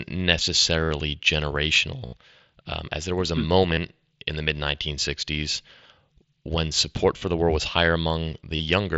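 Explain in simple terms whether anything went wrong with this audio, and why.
Concealed Bluetooth headset packet loss: the headset's link to the phone dropped audio at 0.85, 2.06, 3.71, 7.18 and 8.56 s, each gap of 30 to 70 ms. The phone filled each gap by repeating recent sound, which makes a brief buzzy patch.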